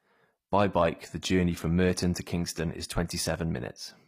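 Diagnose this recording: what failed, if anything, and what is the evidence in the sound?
The codec stage is where it went wrong. Across the whole speech clip the top end sounds bright but fake: s sounds come out gritty and a bit lispy, with a metallic sheen that doesn't sit with the lower voice. That's likely HE-AAC compression at a low rate, something like 24 kbps. The codec keeps only the lower spectrum and rebuilds the treble by copying lower bands upward, so the harmonics above the crossover never quite line up.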